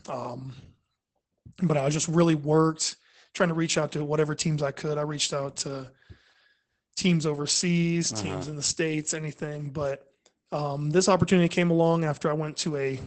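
Speech, carrying Opus voice compression from start to finish. Nothing survives above about 8.7 kHz, which points to the SILK linear-prediction coder running in wideband mode, and the coarse coding of the excitation signal makes the damage plainly audible: a muffled, hoarse and faintly robotic quality. That degree of roughness fits a bitrate of around 12 kbps with 20 ms frames, where too few bits are left for fine spectral and excitation detail.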